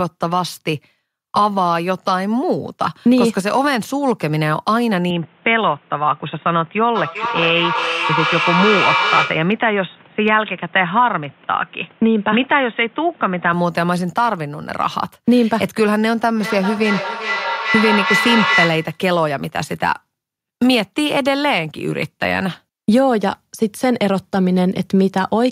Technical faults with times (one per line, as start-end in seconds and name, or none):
5.10-13.53 input switched to a poorer device
6.95-9.63 feedback echo between two devices
16.37-19.05 feedback howl